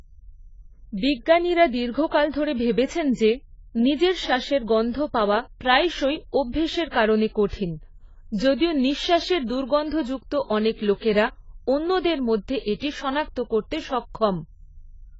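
A speech recording that sounds dull and smeared from start to finish, with nothing above about 7.6 kHz and a warbling, fizzy texture on sibilants and held sounds. This is likely heavy AAC compression, with a low-complexity encoder at a rate near 16 kbps cutting the top band.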